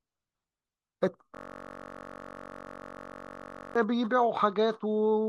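Speech, interrupted from 1.35 to 3.76 s by a system hang loop: one 21.33 ms slice repeats identically, producing a steady 46.9 Hz buzz, which fits a 1024-sample ring buffer cycling while the system froze. Unlike a dropout, nothing goes silent.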